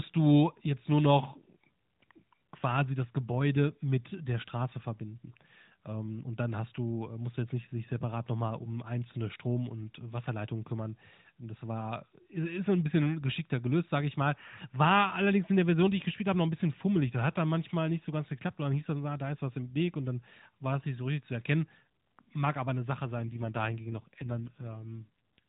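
From 23.18 s to 25.39 s the speech turns rougher, buzzier and more synthetic, with no gap and no narrowing of the already 4 kHz-limited mobile band. This is an AMR rate drop, consistent with a fall from 12.2 to 5.9 kbps as the codec traded speech detail for error protection.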